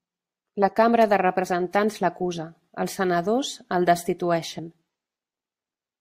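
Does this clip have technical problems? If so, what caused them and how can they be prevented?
Yes. At 4.58 to 4.60 s the speech is broken by a short glitch caused by damaged data in a compressed stream: corrupted bytes made the decoder misread those frames and lose sync until it found the next frame header. Prevent this by using checksummed transport and verifying file integrity before decoding.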